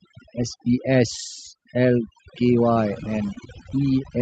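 Overdone noise removal runs through the whole clip. The suppressor was set too aggressively, cutting individual frequency bands whenever they sat near its noise estimate. Quiet speech components went with the noise, leaving a lowered background that breaks up into twinkling specks.

Repeated stalls (stutter) occur from 2.73 to 3.74 s. Packets arrived late, so the jitter buffer repeatedly ran dry and the receiver stretched the last sound to cover each wait. The longest wait was 17 ms, and about 122 ms in total was filled in. Nothing was lost, but the speech drags and stutters.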